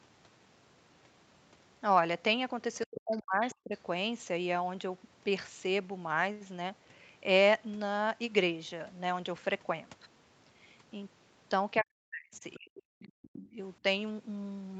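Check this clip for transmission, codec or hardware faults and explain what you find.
Two echo-canceller faults appear, both around moments of double talk. The Opus call path keeps the sound up to 8 kHz.

Other side's voice leaking through occurs at 2.85 to 3.18 s, 3.51 to 3.55 s and 13.03 to 13.5 s. A second voice sits behind the talker, about 15, 25 and 20 dB down. It is likely loudspeaker echo that the canceller failed to subtract from the microphone signal.

Speech suppressed in double talk occurs at 2.86 to 3.73 s, 11.81 to 13.2 s and 13.52 to 13.58 s. The talker's level collapses in pieces, by up to about 40 dB in the first two spans and about 15 dB in the last. The canceller likely mistook the overlapping speech for echo and attenuated everything.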